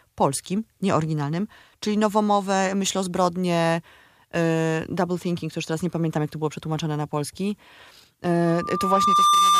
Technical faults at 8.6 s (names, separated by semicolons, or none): loudspeaker feedback squeal